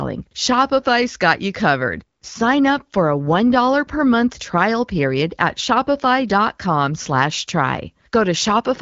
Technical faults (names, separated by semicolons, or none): none